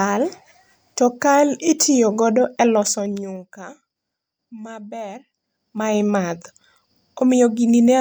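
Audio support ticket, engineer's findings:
Zipper noise, 2.79–3.44 s after "to kal itiyogodo e", and 5.41–6.01 s. Gain stepped in 2 dB increments, unsmoothed, down then up around 15 dB. Audible ticking, roughly 15–20 steps/s.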